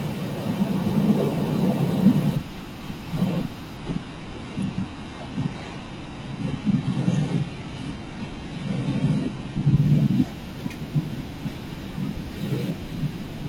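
From 3.77 to 9.77 s the adaptive stream switches to a lower bitrate, so codec artefacts abruptly rise and the speech loses everything above 11.3 kHz.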